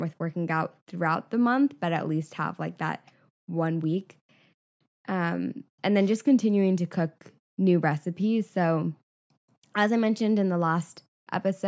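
No technical faults can be heard anywhere in this recording.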